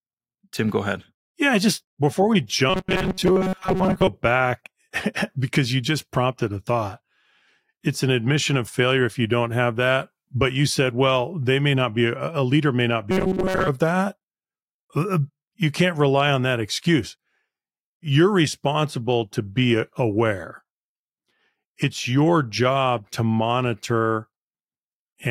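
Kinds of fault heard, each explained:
Robotic sound from repeated short buffers: new audio is likely reaching the playback side too slowly, so it keeps replaying a tiny slice of about 5 ms while most of the real audio in between is skipped. That constant loop stamps a fixed 188 Hz buzz onto the speech, turning it harsh and metallic while the rough word shape survives, first from 2.70 to 4.08 s after "just before we" and again from 13.11 to 13.69 s after "a leader may not".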